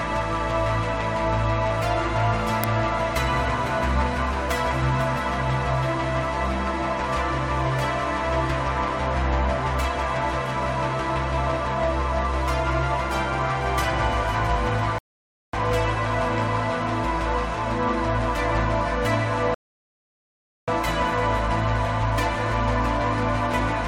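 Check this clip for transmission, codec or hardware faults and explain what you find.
Three faults are audible: one uninitialised buffer burst and two rebuffering stalls.

An uninitialised buffer at 2.64 s plays leftover memory instead of audio, producing a roughly 1.3 ms loud crack, which fits a 64-sample block.

Rebuffering stalls at 14.98 s and 19.54 s occur when the player runs out of downloaded audio. It falls silent for about 0.55 s and then about 1.13 s, and each time resumes exactly where it stopped.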